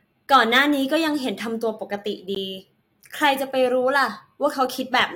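A gap between stream segments appears at 2.35 s, where the speech drops out for about 14.5 ms of digital silence with abrupt edges on both sides. The time stamps of two consecutive stream segments fail to line up, leaving a short hole that the player pads with silence rather than audio. Nothing is removed from the speech itself; the silence is inserted, so the sound after the hole arrives slightly later.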